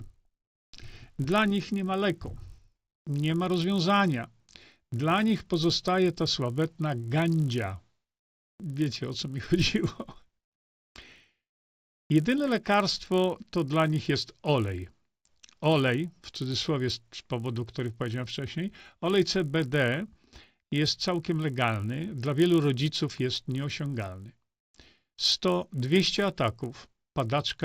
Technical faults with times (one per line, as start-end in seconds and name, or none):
0.00-27.64 resampler restarted on every block